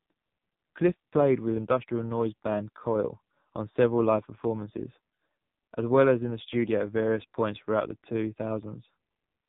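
Throughout, the speech sounds buzzy, muffled and synthetic, with nothing above 4 kHz. That is heavy AMR narrowband mobile codec damage: the vocal-tract model is driven by very few pulses per frame, which fits the low 5.9 kbps AMR-NB mode.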